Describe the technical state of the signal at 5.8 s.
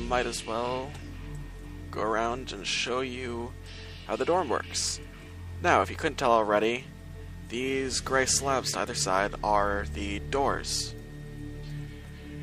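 At 5.8 s the signal is intact, with no dropout, distortion, glitch or other technical fault audible at that point.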